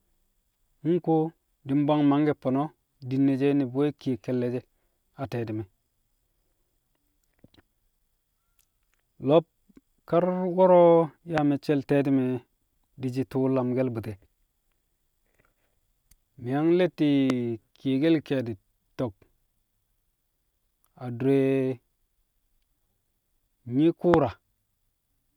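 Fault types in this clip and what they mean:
Loud pop: three single sharp pops, each about 20 ms long, at 11.38, 17.3 and 24.14 s, about 15 to 20 dB above the speech, which carries on underneath. Each is likely a sudden voltage pulse, from a switch or static, added to the signal.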